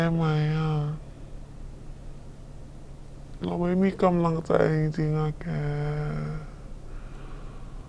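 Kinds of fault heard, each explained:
Wrong sample rate: the speech is slow and deep the whole way, 0.69 speed and 6.5 semitones down, which fits 32 kHz audio played at 22 kHz.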